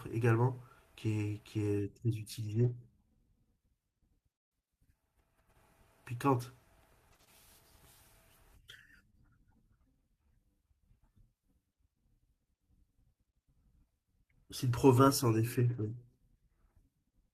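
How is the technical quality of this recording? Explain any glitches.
The speech in this recording has three packet-loss events. Two were repaired well enough to leave only brief roughness, and one stretch contains several small concealed holes.

Lost packet rebuilt from error correction, at 2.55–2.69 s and again at 15.73–15.87 s. In each case about 80 ms of audio is rebuilt, which suggests several separate packets went missing. Each following packet carried a low-bitrate duplicate of the lost one, and the decoder played those duplicates, so nothing drops out. The trade-off is that those moments sound coarser and noisier than the surrounding speech.

Scattered short gaps between 7.09 and 9.15 s. Roughly four separate packets arrived late or not at all, and the receiver covered each hole by extending the preceding sound. The patches add up to about 70 ms, the longest near 30 ms, affecting only a small fraction of the span. 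They come through as brief ticks, slight smears or small hiccups in the speech.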